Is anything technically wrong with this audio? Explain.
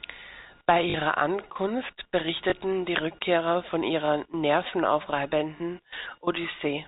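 Yes. There is packet loss with the last packet repeated, at 0.90–0.94 s, 2.50–2.52 s, 4.06–4.08 s and 5.58–5.60 s. Each gap was filled by replaying the previous chunk. The first lasts 40 ms, the others 20 ms, which fits 20 ms packets. The repeats ignore the pitch cycle. At 0.9 s this becomes a brief robotic stutter buzzing near 50 Hz. The G.711 telephone coding stops everything above 4 kHz.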